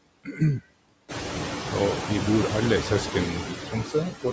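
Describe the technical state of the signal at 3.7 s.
The noise suppressor misjudged part of the speech as background noise between 3.43 and 3.95 s and pulled it down by up to about 11 dB along with the noise. Roughly a third of a second of soft sounds and endings comes out swallowed and faint. Throughout the clip, the same suppressor lowers the steady noise by about 8 dB, frame by frame. That noise, which rose at about 1 s to sit about 7 dB below the speech, sinks between the words and rises under them.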